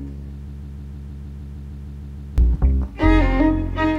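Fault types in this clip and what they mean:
Broken-record loop: the player, encoder or stream most likely stalled and kept resending the last short fragment it held instead of new audio. From 0.48 s to 2.38 s a piece about 155 ms long repeats exactly, back to back, twelve times. This produces a rapid mechanical stutter at roughly six to seven repeats per second. The sound that belonged in those nearly two seconds never arrives and is missing from the clip.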